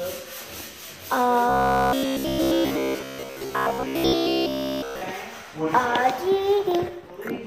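From 1.49 s to 5.02 s the sound turns into a rigid metallic buzz near 66.7 Hz: robotic sound, likely from one 15 ms buffer repeated throughout while new audio is skipped.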